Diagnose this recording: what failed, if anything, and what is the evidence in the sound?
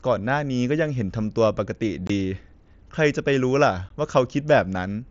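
The Bluetooth link failed: unconcealed Bluetooth headset packet loss. Speech cuts out from 2.07 to 2.10 s and briefly at 3.89 s. These abrupt gaps fit two or three lost headset packets, filled with silence rather than concealed, while the mSBC audio carries on around them.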